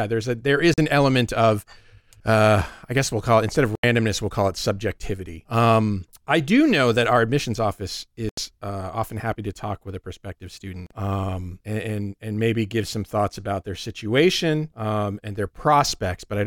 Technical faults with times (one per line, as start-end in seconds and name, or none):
0.74-0.78 Bluetooth dropout
3.75-3.84 Bluetooth dropout
8.29-8.38 Bluetooth dropout
10.86-10.91 Bluetooth dropout